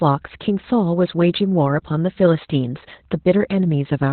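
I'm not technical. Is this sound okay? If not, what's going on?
No. From start to finish, the speech has Opus voice compression applied heavily, the kind used to squeeze voice calls through very little data. Everything above about 4.4 kHz is gone, so the voice sounds muffled, like an old phone line. What sets it apart from simple muffling or a cheap speaker is the texture. The voice also turns hoarse and slightly robotic, because the coder rebuilds it from a rough sketch rather than keeping the real detail.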